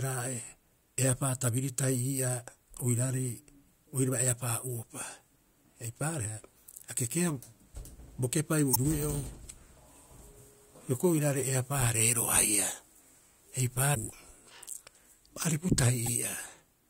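Speech with damaged data in a compressed stream. Short glitches occur at 8.71–8.76 s, just after "bo kepai", at 13.91–13.97 s and at 16.03–16.08 s. There the decoder misreads corrupted frames and resyncs.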